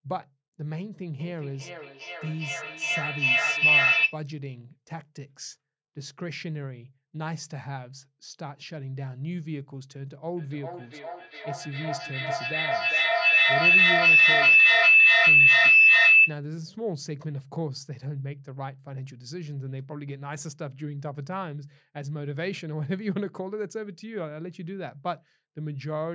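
At 1.2 s a feedback howl takes off, climbing to about 13 dB over the speech around 3 kHz, pulsing roughly every 400 ms until 4.27 s. That's a mic-to-speaker loop gaining each trip. It comes back harder from 10.37 to 16.46 s, peaking about 16 dB up.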